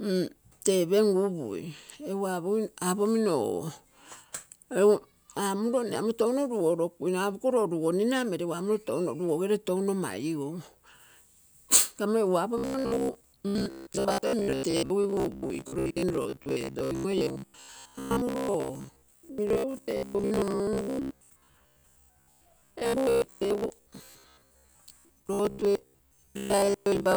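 From 12.58 s onward, robotic sound from repeated short buffers imposes a metallic 66.7 Hz buzz, likely a looped 15 ms buffer, seen as harmonic striping.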